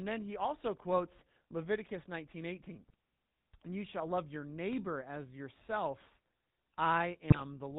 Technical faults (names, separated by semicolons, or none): GSM full-rate codec; GSM bit errors